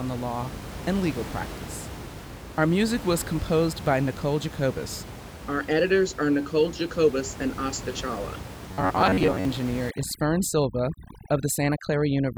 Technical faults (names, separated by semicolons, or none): robotic sound from repeated short buffers; overdone noise removal